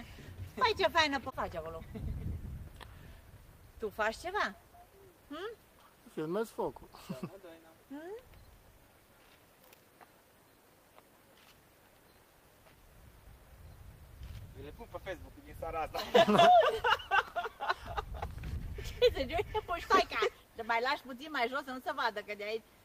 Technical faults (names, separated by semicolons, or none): clock drift between sender and receiver; repeated timing corrections